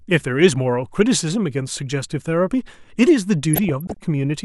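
From 3.53 to 3.97 s, bit errors escape error correction into MP2 data: DAB burbling, with short blips of noise in single sub-bands over the speech.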